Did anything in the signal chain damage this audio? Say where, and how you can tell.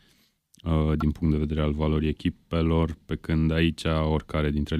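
Yes. The damage sits at the codec stage, as damaged data in a compressed stream: at 1.00 to 1.03 s, just before "punct de vedere al", a brief glitch breaks into the speech. Corrupted bytes made the decoder misread frames, lose sync and resume at the next valid header.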